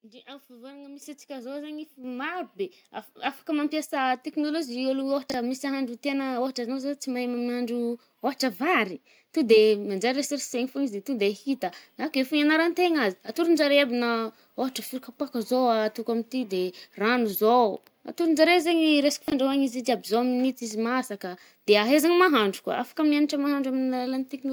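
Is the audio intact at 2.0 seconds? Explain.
No, at 2.04 s the call software raised the microphone's input volume in one step, so speech and background jump up together by about 6 dB.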